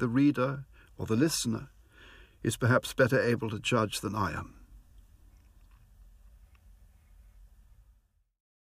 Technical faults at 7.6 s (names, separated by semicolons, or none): none